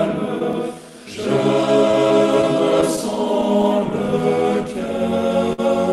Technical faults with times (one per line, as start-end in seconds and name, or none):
0.00-5.92 clock drift between sender and receiver
0.68-4.87 repeated timing corrections
1.91-3.65 scattered short gaps
5.53-5.60 short stall from a late packet